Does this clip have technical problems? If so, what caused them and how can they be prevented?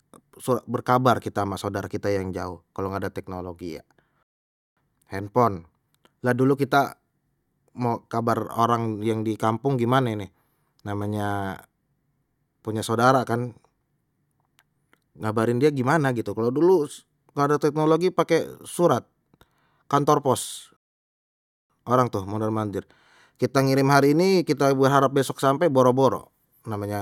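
Yes. The speech drops into dead silence twice, from 4.23 to 4.77 s and again from 20.77 to 21.70 s, then carries on exactly where it broke off, so nothing is skipped but about 0.54 s and 0.93 s are added. These are rebuffering stalls: playback drained the downloaded audio faster than new data arrived, so the player halted until its buffer refilled. A larger startup buffer and adaptive bitrate switching would prevent these stalls.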